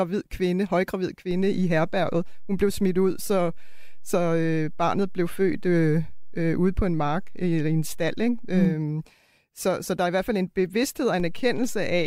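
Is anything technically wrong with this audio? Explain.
Yes, there are two DC steps. At 1.31 s the waveform's zero line jumps by an offset of about -29 dBFS, as if the converter recalibrated or an offset input was switched in. It holds until 8.65 s and then steps back. At 11.20 s a second step of about -28 dBFS occurs and lasts to the end. Each jump and return sounds like a low thump or click, while the speech itself continues unchanged.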